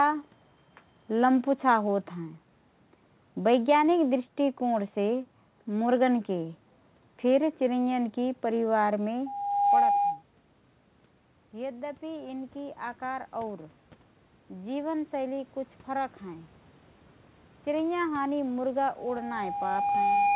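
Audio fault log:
9.26–10.23 s and 18.97–20.35 s, loudspeaker feedback squeal: the microphone picked up its own loudspeaker, and the loop gain exceeded one at 811 Hz, so a pure tone grew on itself. It swells in about half a second to roughly 15 dB above the speech, then more slowly, over about 1.5 s, to roughly 5 dB above.
11.51–16.53 s, automatic gain rising: after the input fell by 15 dB, the automatic gain control judged the level too low and raised its gain by 7 dB over five seconds. Speech and room background swell upward together, gradually rather than in a step.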